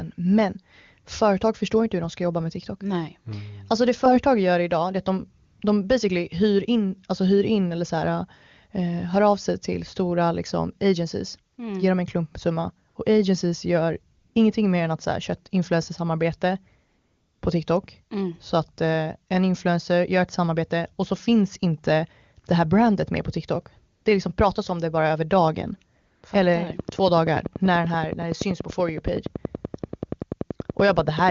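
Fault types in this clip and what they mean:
AMR comfort noise: the phone judged the talker silent and stopped sending speech frames, so the receiving end filled each gap with smooth synthetic noise built from a rough level and spectrum estimate. Seven such gaps occur, from 20 ms up to 540 ms, the longest at 16.87 s. One sits between "det är att de" and "de basically hyr in", another between "agencies gör" and "mer än att köra". The real background drops out and steady hiss switches in.
train of clicks: from 26.7 s to the end, roughly fifty near-identical clicks arrive at a regular 10.5 per second, peaking about 10 dB above the speech. They begin shortly after the pause following "det bara över dagen" and tick steadily over both speech and silence. The even spacing and uniform shape point to a likely cause in periodic interference, such as nearby electrical equipment or a faulty connection or power supply.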